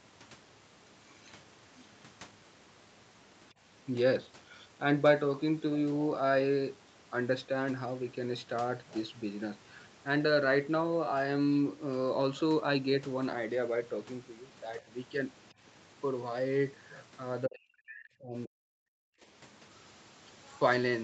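From 17.47 to 18.97 s the speech sinks sharply, by around 40 dB, then recovers. This is most likely speech suppressed in double talk: an echo canceller mistook the talker for far-end echo. Unlike a packet-loss gap, the level is pushed down over the full 1.5 s.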